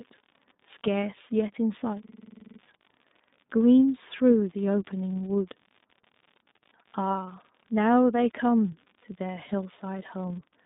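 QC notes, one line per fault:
Throughout, iLBC codec: the speech is squeezed into a narrow telephone band of roughly 150 Hz to 3.7 kHz, with nothing at all above 3.8 kHz, so it sounds boxed-in and dull. On top of that there's a plainly audible rough, slightly synthetic grain. The codec rebuilds each short chunk of excitation on its own, without leaning on the previous one, and the texture fits 20 ms frames in the 15.2 kbps mode.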